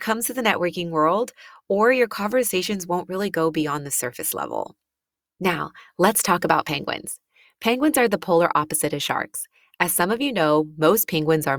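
No technical faults detected.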